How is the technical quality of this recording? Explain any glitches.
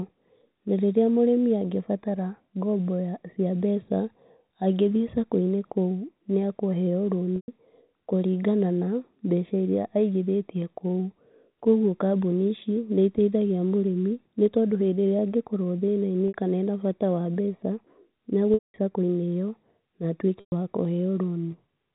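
The recording has four brief dropouts, carried over telephone-band G.711 coding that cuts everything above 4 kHz.

Packet loss with pitch repetition occurs at 7.36–7.48 s (just after "nĩ akũheo"), 16.28–16.34 s, 18.54–18.74 s and 20.40–20.52 s. Audio went missing, about 120, 60, 200 and 120 ms respectively, and the receiver filled each gap by looping the last pitch period, fading it over roughly 50 ms. The 60 ms gap sounds like a briefly held buzz. The longer ones fade to silence before speech cross-fades back in.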